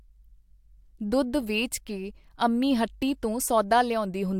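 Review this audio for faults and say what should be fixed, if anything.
No faults heard; nothing needs fixing.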